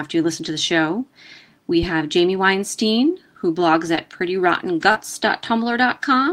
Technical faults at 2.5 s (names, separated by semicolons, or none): none